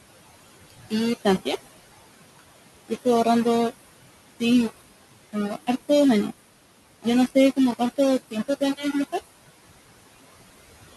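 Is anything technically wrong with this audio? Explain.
Yes, a few things are going on.

All the way through, the speech has a grainy, gritty distortion that shifts with the sound, and the quietest bits sputter or drop out. That's likely coarse rounding without dither, down to something like 4 bits. The error sits only around 15 dB below the signal.

There are also noise suppressor artifacts throughout. The suppressor pulls down what it judges to be steady noise by about 19 dB, so the background dips between phrases and swells back under the speech.

Between 8.31 and 8.94 s, the suppressor cuts into the speech itself, mistaking parts of it for noise. Totalling something like 150 ms, soft sounds get pushed down by up to about 14 dB and come out swallowed or faint.

The room noise underneath, around 15 dB below the speech, is just part of the recording space.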